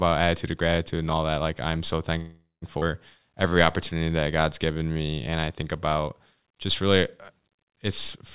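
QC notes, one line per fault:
2.18–2.65 s, call audio freeze: the audio stalls for about 0.44 s. The last sound is carried on and fades, ending in about 170 ms of silence, then resumes where it stopped with nothing lost. This is likely packets held up in transit, draining the jitter buffer empty.
2.80–2.85 s, skip ahead: playback jumps forward, dropping roughly 0.3 s of speech. The two sides are joined almost directly by an 18 ms bridge. Audio already queued behind the dropped stretch played straight on, whether the loss came in transit or from a jitter buffer overflow.
3.19–3.55 s and 3.94–5.46 s, jitter buffer slow-down: the speech runs at 87% speed with unchanged pitch, adding 58 ms and 202 ms. The receiver repeated single pitch periods or pause fragments many times over to rebuild its reserve, stretching the sounds out.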